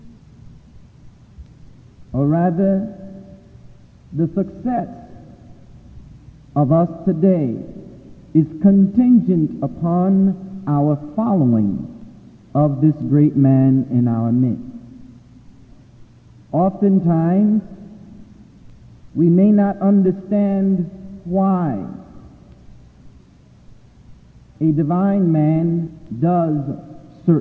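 Nothing goes wrong here: the audio simply sits inside an ordinary call connection, with the top end stopping at 8 kHz in a way that fits a wideband codec such as G.722 at 64 kbps.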